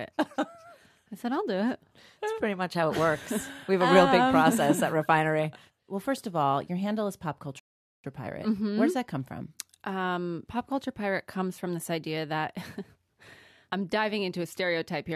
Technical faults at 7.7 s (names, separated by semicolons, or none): rebuffering stall